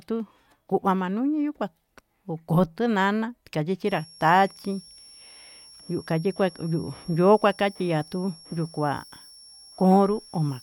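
From 3.88 s, right after "kuá koko tunana tayi", a switching supply whistle comes in and stays to the end: a thin high tone wandering between about 5.44 and 5.55 kHz, sitting roughly 25 dB under the speech, from a power supply cycling in an audible burst mode or beating with another supply.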